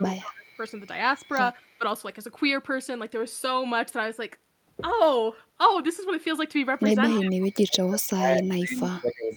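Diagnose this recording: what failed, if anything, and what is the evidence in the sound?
The call processing likely fell into speech suppressed in double talk, with the echo canceller ducking the near talker while the far side spoke. The speech drops by about 20 dB around 0 to 0.59 s, about 10 dB at 1.78 to 1.82 s, and up to about 30 dB from 6.95 s to the end.

An echo leak is also present, likely from a loudspeaker echo canceller passing residual pickup back down the line. Brief delayed copies arrive 239 ms behind the speech: a faint scrap at 1.73 to 1.78 s, about 35 dB down, and a clearer one at 7.09 to 7.14 s, about 15 dB down.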